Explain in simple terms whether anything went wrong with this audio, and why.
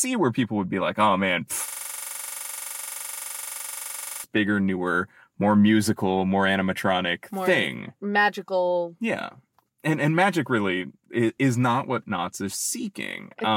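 Yes, something went wrong. From 1.68 to 4.24 seconds the speech freezes into a system hang loop. The computer stalled, but the sound hardware kept replaying the same tiny slice of audio, about 43 ms long, roughly sixty times in a row. Repeating 23.4 times a second, it comes out as a rattly buzz instead of speech. The slice length fits a 2048-sample buffer. Normal audio picks up again with "bigger newer more musical".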